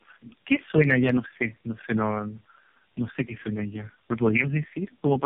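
Throughout, tandem speech coding: repeated low-rate re-encoding, consistent with three AMR-NB stages in a row, compounds damage, leaving the speech rough, warbly and muffled, with nothing above 3.5 kHz.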